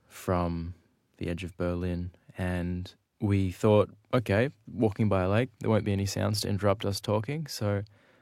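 No technical faults can be heard in this recording.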